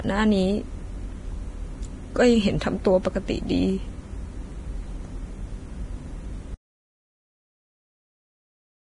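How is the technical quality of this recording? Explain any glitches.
Poor, with two problems. Throughout, the speech was likely encoded with low-bitrate Vorbis compression, around 22 kbps. Treble is coarsely quantised and nothing remains above 10.6 kHz, so the sound is hissy, grainy and heavily damaged. From 6.55 s to the end, the audio input was likely lost while recording continued, an audio dropout to silence. The speech cuts off abruptly, leaving dead silence with no room tone.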